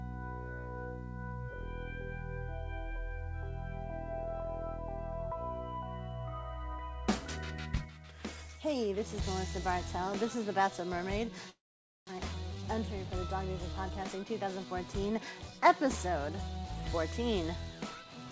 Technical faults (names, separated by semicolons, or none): long network dropout; jitter buffer speed-up